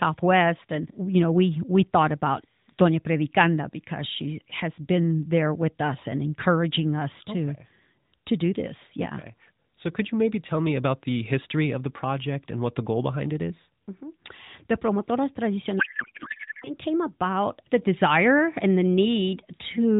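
A codec payload misread from 15.80 to 16.70 s: octet-aligned AMR frames decoded as bandwidth-efficient put fields in the wrong places, turning this speech clip into garbled noise and warble that barely tracks the voice. Throughout, the AMR narrowband mobile codec caps the audio at 4 kHz, with light coding colour that fits a bitrate near 12.2 kbps.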